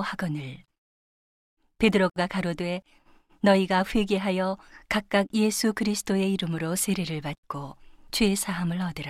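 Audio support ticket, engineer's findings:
Gap at a join of encoded pieces, 2.10–2.16 s. Segments encoded separately, then concatenated untrimmed; encoder start delay and last-frame padding left in. Result: roughly 66 ms silence cutting into continuous speech, smeared edges, speech resuming where it stopped.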